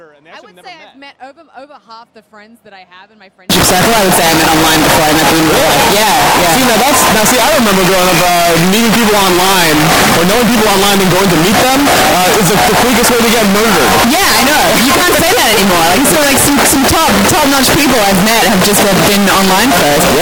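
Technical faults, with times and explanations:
3.50 s to the end, signed and unsigned mixed up: the sound turns into very loud, harsh distortion in which quiet stretches are as loud as the rest. The likely cause is 16-bit samples read with the wrong sign convention, flipping the top bit so every zero crossing jumps across the full range.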